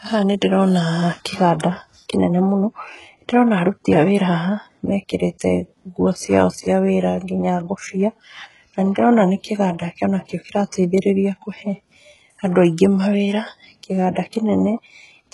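Throughout the speech, the treble sounds synthetic: s sounds come out gritty and lispy, and nothing is present above 11.5 kHz. This is likely HE-AAC compression, heavily damaged, which fits a bitrate near 12 kbps, where copied-up lower bands stand in for the real highs.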